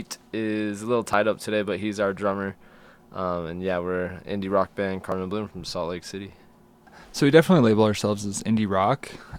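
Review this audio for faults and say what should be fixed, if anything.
Two tiny skips at 1.13 s and 5.12 s come from overlap between stream segments. The time stamps of adjacent segments claim the same stretch of time, so the player trims the duplicate portion, even though that audio was never actually repeated. About 6 ms and then 4 ms of real sound disappear, and the waveform jumps at each join. The spacing is consistent with 2-second segments. A dropout would leave a gap or silence, but here nothing pauses and the sound simply lurches forward. Fix it by having the packager write contiguous, non-overlapping segment time stamps.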